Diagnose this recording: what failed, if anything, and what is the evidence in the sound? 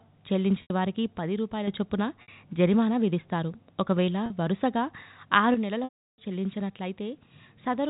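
Network packet loss with pitch repetition: repeated pitch periods bridge gaps at 0.62, 2.22 and 4.26 s (80, 60, 40 ms) as a buzzy held sound. The 340 ms loss at 5.84 s fades to silence.

One channel drops out from 5.54 s to the end, likely a wiring or input failure. The shared sound falls abruptly by about 6 dB in the mono sum, heard through the band-limited telephone coding.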